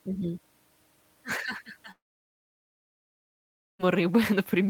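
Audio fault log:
1.91–3.81 s long network dropout: audio likely stopped arriving for 1.88 s; a brief fading tail gives way to 1.82 s of silence, and speech resumes minus the lost part.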